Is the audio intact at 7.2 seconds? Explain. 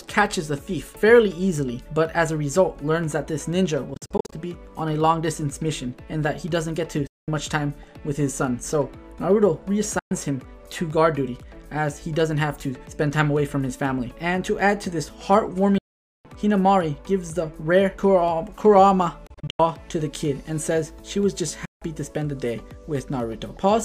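No, 7.2 seconds falls inside a gap from 7.07 to 7.28 s where the output just drops to silence for about 0.2 s. It's likely a Bluetooth dropout: packets didn't reach the headphones in time, got discarded, and the sound picks up afterwards as though it had kept playing.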